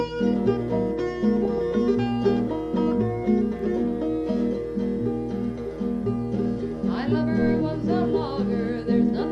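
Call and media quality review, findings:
Music, whole clip: dull top end, gurgling granular texture, upper bands flickering in and out. MP2 compression, likely cause. Layer II short of bits drops high sub-bands and coarsely quantises the rest. Damage plainly audible, fits about 80 kbps.

1.45 to 1.63 s: burbling burst over the music. DAB burbling. Bit errors slip past error correction into the MP2 data. Corrupted samples put noise blips in single sub-bands; corrupted scale factors make sub-bands jump in level. Span fits about eight frames, roughly 0.2% bit error rate.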